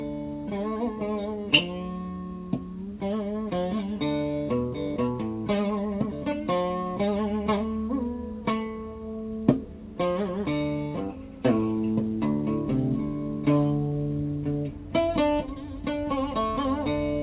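Nothing stood out on listening, beyond the narrow call-path sound with nothing above 4 kHz that fits a G.711 A-law link.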